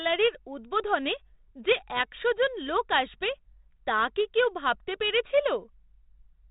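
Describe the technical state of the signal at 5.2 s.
At 5.2 s the signal is intact, with no fault present, just the steady 32 kbit/s G.726 ADPCM telephone coding that leaves nothing above about 3.8 kHz and only a light trace of its coding noise.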